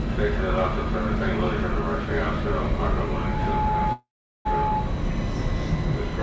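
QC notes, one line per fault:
3.04–4.98 s, loudspeaker feedback squeal. A steady tone at 855 Hz rises out of the sound and swells over roughly half a second until it is about as loud as the sound itself. A microphone is hearing the loudspeaker it feeds. At 855 Hz the loop returns more than it sends, so the tone grows on its own. It holds at that level until the loop is broken at 4.98 s.
3.92–4.48 s, call audio freeze. The sound stops moving forward. The last moment is stretched into a brief fading buzz, then about 0.39 s of silence, filling about 0.53 s in total. Incoming packets were likely held up, so the jitter buffer ran empty and had nothing to play. When they arrived, the audio resumed exactly where it stopped. Nothing is lost, but everything after runs about 0.53 s later.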